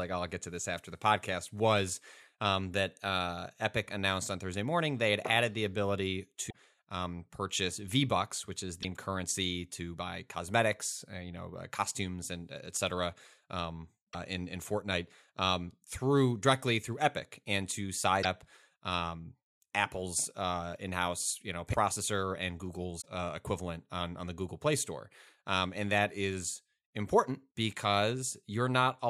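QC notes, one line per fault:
6.49–6.54 s, 8.82–8.85 s, 14.12–14.15 s, 18.22–18.25 s, 21.72–21.75 s, 23.00–23.06 s: broken MP3 bit reservoir. The speech jumps ahead each time, with a glitch of about 28 to 56 ms. The first follows "had added the ability" and precedes "um purchase". The fifth follows "you know". The last precedes "uh equivalent on on". Each cause is likely lost frames of about 26.1 ms. The next frame then reads borrowed bytes from a different frame, so it decodes as garbage.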